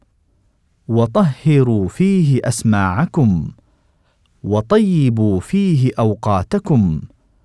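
No technical faults can be heard in this speech recording, so there is nothing to place in time order.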